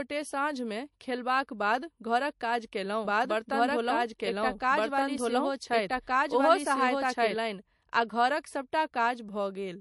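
The speech runs through MP3 compression the whole way, with nothing above 11.3 kHz and a watery, swirly texture where weak frequency content flickers between frames. That points to a low bitrate of around 48 kbps, which likely starved the encoder of bits. From 3.05 s, just after "खेलबाक बाद घरक काज", to 7.35 s, just before "आ घरक", a doubled audio track appears. A second full-band copy at about the same level trails by roughly a second and a half, probably from a second capture path or a misaligned edit, and it cuts in and out abruptly with no room decay.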